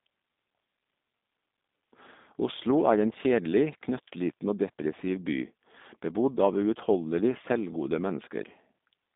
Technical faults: G.729 codec

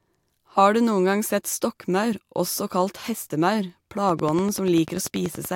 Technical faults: train of clicks

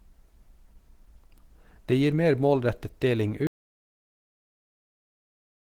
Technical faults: Opus compression; audio dropout to silence

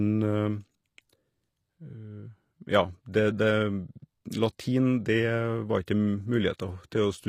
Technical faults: HE-AAC compression; pre-echo

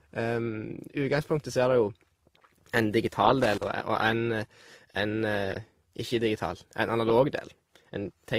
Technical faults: transcoding between lossy codecs; loose connector crackle

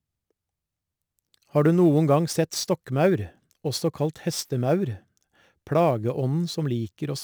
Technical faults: sample clock jitter

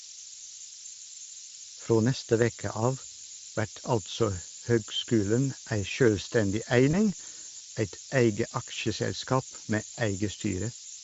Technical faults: low bit depth with noise shaping; Speex codec; VoIP packet loss concealed by the speech codec

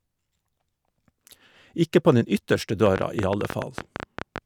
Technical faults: train of clicks

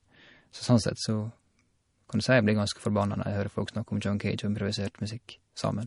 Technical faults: MP3 compression

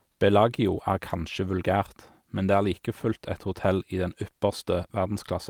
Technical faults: none

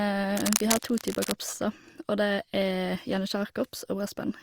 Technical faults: cable scratch noise

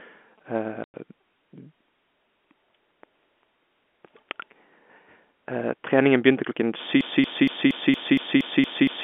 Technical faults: packet loss filled with silence; broken-record loop

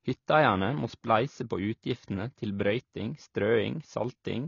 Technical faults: AAC compression

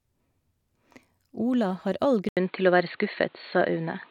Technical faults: input switched to a poorer device

